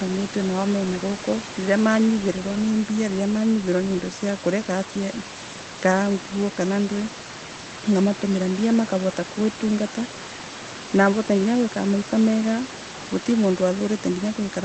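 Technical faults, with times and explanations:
No technical faults detected; the room noise sitting about 15 dB under the speech belongs to the recording environment.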